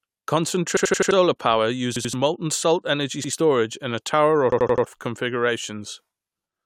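Speech with repeated buffer stutters at 0.77–1.11 s, 1.96–2.13 s, 3.24–3.33 s and 4.52–4.86 s. Each time, one 85 ms chunk, which fits a 4096-sample buffer, plays again up to four times with hard joins because fresh audio arrived late. It repeats sound rather than leaving the silence a dropout would.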